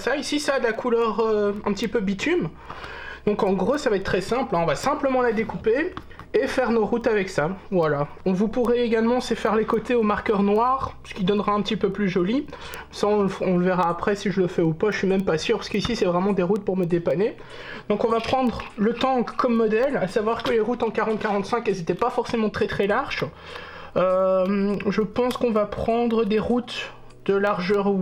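Word clock ticks run through the sound from 0.2 s to 28.0 s: sharp clicks of uneven strength about every third of a second, around a hundred in all. A receiver on its own clock slips one sample each time, which fits a mismatch of several tens of ppm. On a spectrogram they show as thin, evenly spaced vertical lines, and as tiny single-sample steps in the waveform.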